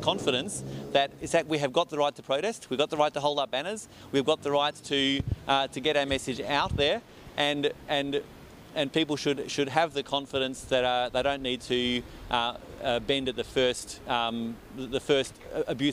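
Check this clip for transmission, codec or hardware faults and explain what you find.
No faults turn up in this clip.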